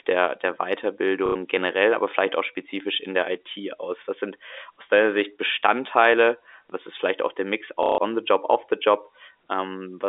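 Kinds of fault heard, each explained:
Packet loss with last packet repeated: gaps at 1.26–1.35 s, just before "generell aber vielleicht auch", and 7.83–7.98 s are filled by replaying the previous packet. This gives a robotic stutter near 33 Hz, which fits 30 ms packets. The waveform shows identical repeated blocks.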